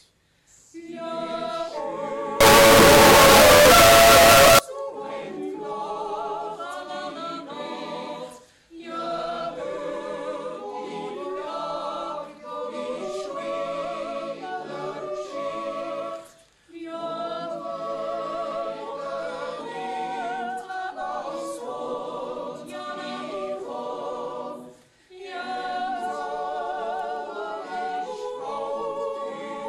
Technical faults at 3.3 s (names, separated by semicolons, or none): signed and unsigned mixed up